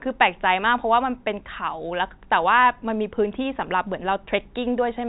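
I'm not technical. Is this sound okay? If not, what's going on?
Yes, this is ordinary telephone-quality speech carried by G.711 telephone coding, so nothing above about 3.8 kHz comes through, which gives the familiar slightly narrow phone-line sound.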